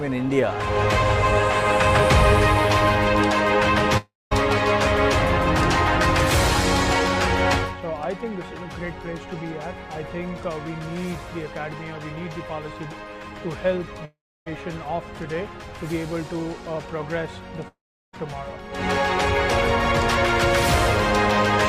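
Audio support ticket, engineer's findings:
Three gaps at 3.97–4.33 s, 14.05–14.48 s, 17.68–18.15 s. Sound smears into fading buzz, goes silent, then resumes with material skipped. Likely long network dropout, with receiver concealment stretching the last frame. Spectrogram shows smeared streaks fading to blank columns. Waveform tapers to a flat line.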